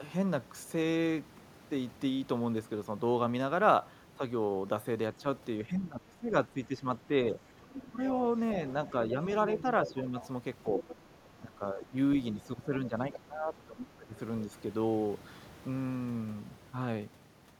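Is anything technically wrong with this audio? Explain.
Yes, there are two echo-handling problems. Speech suppressed in double talk hits at 5.18–8.0 s, 8.92–10.15 s and 11.41–14.53 s: the voice dips and thins, by up to roughly 15 dB, likely because the echo canceller ducked everything while both sides talked. The other side's voice leaking through shows up at 7.74–7.87 s and 9.57–10.95 s as a second voice, roughly 10 dB down, likely echo the canceller missed.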